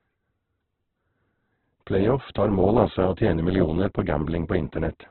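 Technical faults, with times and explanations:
Throughout, Opus compression: the speech is heavily roughened and grainy, with nothing above 4.2 kHz. The likely cause is Opus music mode at a bitrate near 8 kbps, filling bands with noise instead of leaving holes, so it lacks MP3's swirl.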